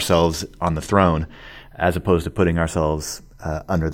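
Channels drifting apart runs through the whole speech clip. The two channels were clocked separately, roughly 50 ppm apart, so their offset creeps up to a fraction of a millisecond. Summed to mono, the resulting comb notches glide slowly, heard as slow flanging.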